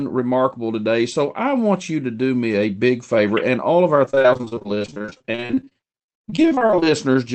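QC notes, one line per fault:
4.05–6.85 s: repeated packet loss (robotic sound). Dozens of brief dropouts, none longer than 38 ms, break up the speech across this span. Each hole is filled by stretching the last sound, so roughly two-fifths of the stretch is patched, giving choppy speech with pieces missing.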